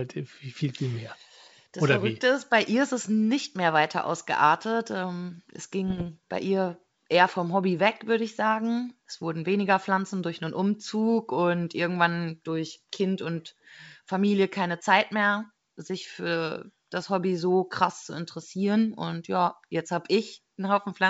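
From 5.88 to 6.09 s the speech breaks into pops and short rough bursts, with the level jumping briefly up and down: bit errors on an ADPCM link. Within the G.722 wideband stream, a sparse scatter of flipped bits corrupts the coded samples. Each one also knocks the decoder's step size and predictor off track, so the damage rings on for milliseconds. A waveform shows spiky, ragged excursions, and a spectrogram shows vertical broadband streaks through the band.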